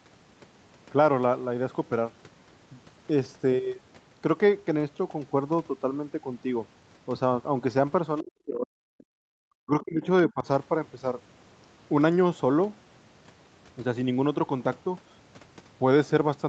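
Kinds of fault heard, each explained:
Other side's voice leaking through: A faint, brief scrap of a second voice surfaces at 8.17 to 8.21 s, roughly 30 dB below the main speech. It is likely loudspeaker sound picked up by the microphone that the echo canceller failed to fully remove.
Speech suppressed in double talk: The talker's speech sinks sharply, by as much as 40 dB, from 8.21 to 8.86 s and from 9.58 to 10.05 s, then dips more gently, by around 10 dB, at 10.28 to 10.46 s. Both sides were likely talking at once, so the canceller turned everything down.
Background gated by the echo canceller: The room tone drops out abruptly from 9.14 to 9.30 s, falling by about 34 dB before returning. The canceller clamped the microphone hard while the loudspeaker was playing, then released it.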